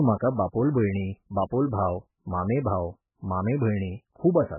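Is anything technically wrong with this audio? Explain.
Yes, the whole clip is damaged by what is likely MP3 compression at a very low bitrate, around 8 kbps. Starved of bits, the encoder cuts off the treble, leaving nothing above 3 kHz, and drops the weaker frequency lines, which flicker on and off between frames. The speech sounds dull and muffled throughout, with a watery, swirling texture, metallic chirps on the s sounds, and smeared consonant attacks.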